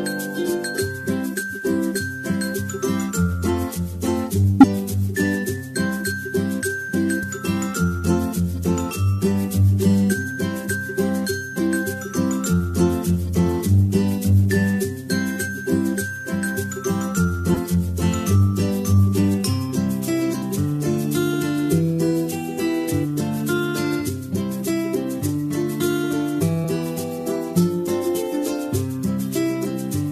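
Compressed frames skipped at 4.60 to 4.65, 7.22, 17.53 to 17.57 and 20.41 to 20.43 s: the audio jumps ahead by roughly 20 to 100 ms each time.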